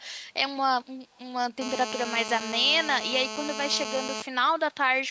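From 1.15 to 1.19 s a brief, very faint delayed copy of the speech surfaces, trailing the original by about 274 ms and sitting far below it. This is likely an echo leak: a loudspeaker on the far end fed the sound back into its microphone, and the echo canceller let a scrap through. On a spectrogram it appears as a weak, smeared repeat of earlier speech energy. On the waveform it is almost invisible beneath the direct signal.

From 1.62 to 4.22 s a hard, raspy GSM phone buzz runs continuously at 217 Hz, loud at about 7 dB below the speech. A 2G phone in an active call pulses its transmitter 217 times a second, and the audio circuitry rectifies those radio bursts into sound. Because the phone is in a call rather than a data transfer, the buzz holds steady instead of coming and going. On a spectrogram it forms a dense comb of evenly spaced horizontal lines at multiples of 217 Hz, reaching up to the 8 kHz ceiling set by the call's microphone processing. 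The waveform shows a regular train of sharp pulses riding under the speech.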